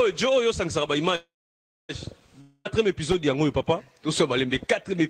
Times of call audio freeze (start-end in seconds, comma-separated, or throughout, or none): 1.15-1.91